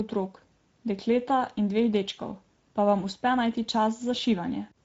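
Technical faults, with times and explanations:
Throughout: Speex codec. The CELP coder has too few bits to model the excitation, which fits a bitrate around 17 kbps. The speech sounds plainly noisy and hoarse, and nothing is left above about 7.7 kHz.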